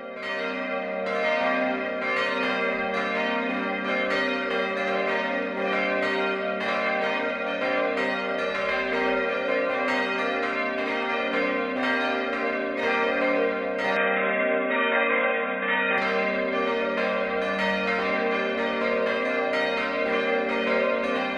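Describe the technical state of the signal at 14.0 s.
At 14.0 s the band suddenly stops around 3.8 kHz, so the sound goes dull and boxy until 15.98 s, with faint new background noise underneath. That's likely the input switched to a poorer device.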